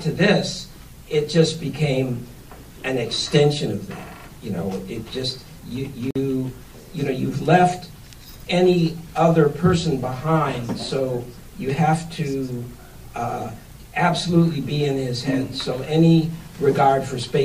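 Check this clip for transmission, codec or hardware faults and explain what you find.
One fault turns up. At 6.11 s a 48.5 ms gap opens, to 6.16 s, with smeared edges that leave a shorter stretch of true silence, then the sound continues where it stopped. This is a gap at a join of encoded pieces: separately encoded sections were spliced untrimmed, leaving encoder padding and start-up delay inside.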